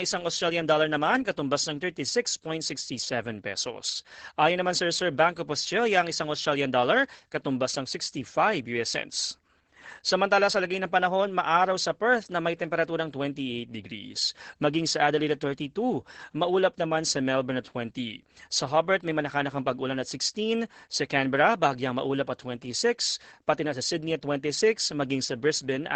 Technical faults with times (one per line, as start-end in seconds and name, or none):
0.00-25.95 Opus voice compression